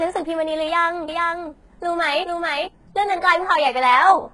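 Speech throughout with a gritty, lispy, metallic treble and nothing above 11.5 kHz, likely from heavy HE-AAC compression at a very low bitrate, around 12 kbps. From 1.08 to 2.68 s, a second copy trails the voice by roughly 0.4 s, a little quieter, starting and stopping abruptly: likely a doubled audio track.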